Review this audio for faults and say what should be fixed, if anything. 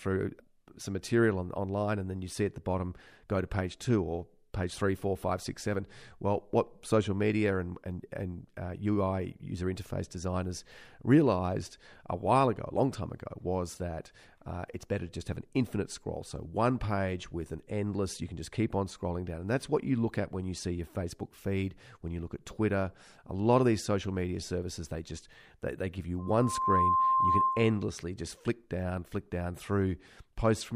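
From 26.19 to 27.84 s a loudspeaker feedback squeal rises over the speech: a single 1 kHz tone swelling over about half a second to a few dB above the voice. A mic is hearing its own loudspeaker, so the loop runs away. Its gradual swell from nothing, unlike a steady interfering tone that starts at full level, marks it as feedback. To prevent it, lower the gain or notch 1 kHz in that channel, and keep the mic out of the loudspeaker's coverage.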